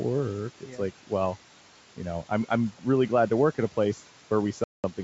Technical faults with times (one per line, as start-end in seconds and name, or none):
0.00-5.04 noise suppressor artifacts
0.58-0.79 speech cut by the noise suppressor
4.64-4.85 packet loss on an ADPCM call